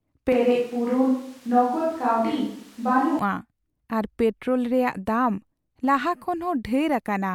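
A switch to a distant microphone runs from 0.32 s to 3.19 s: the speech turns abruptly roomy and hollow, with thinner bass, then snaps back to a close, full sound. The likely cause is that the close microphone dropped out and a far-off one, picking up more of the room, covered that stretch. Loudness stays about the same, but background noise rises to roughly 30 dB below the speech.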